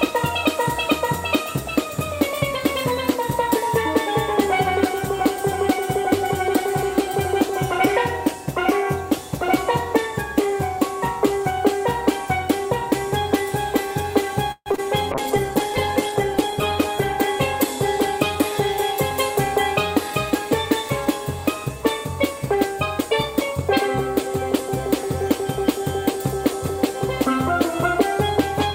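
Packets were likely held up in transit at 14.51 s, emptying the jitter buffer; this call audio freeze stretches the last sound into a fading fill for about 145 ms, including roughly 60 ms of silence, before resuming intact.

Two pieces of audio never reached the decoder in time, from 14.72 to 14.76 s and from 14.76 to 14.80 s, about 20 ms each. This short concealed packet loss was patched by extrapolation and heard as a quick smear.

At 15.12 s the bandwidth estimate collapsed, and this call bitrate drop took the encoder from 128 to 12 kbps, bottoming out for about 1.07 s. The sound turns coarse and muffled until 18.71 s.

From 17.77 to 21.06 s the jitter buffer held excess audio, so the receiver trimmed pitch-period slices, around 150 ms in total. This jitter buffer speed-up makes the audio run about 4% faster at unchanged pitch.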